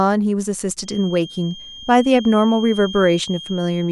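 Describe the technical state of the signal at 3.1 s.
At 3.1 s the speech carries a feedback whistle. It starts at 0.8 s and runs to the end of the clip. A thin, steady tone sits at 3.2 kHz, roughly 20 dB below the speech. Its level swells and fades slowly. The likely cause is a loudspeaker-to-microphone loop held right at the edge of feedback. That loop keeps ringing at one frequency but never builds into a runaway howl.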